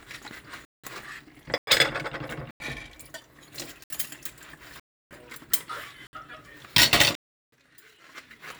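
At 0.65 s, 1.58 s, 2.51 s, 3.84 s, 4.80 s, 6.07 s and 7.15 s the sound drops into a block of digital silence, lasting roughly 186, 93, 93, 63, 312, 61 and 372 ms. The lengths of the first three and the last fit whole buffers of 8192, 4096 and 16384 samples that were left unfilled. Each cut and each return has no fade. On a waveform these are flat lines. On a spectrogram they are empty vertical bands with thin broadband streaks at each boundary.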